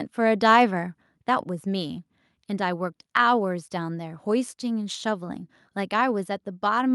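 From 0.51 to 0.63 s the speech has a harsh, crackly edge on its loudest peaks. That's microphone overload: the input runs about 1 dB past full scale, so a small fraction of samples get their tops sheared flat, most likely because the mic input gain was set too high.

Then at 1.02 s the whole level, voice and background together, drops by about 4 dB in one step, and at 6.24 s it drops again by about 2 dB. That pattern is likely the microphone volume being stepped down, with the call software reacting to the hot input by cutting the device gain.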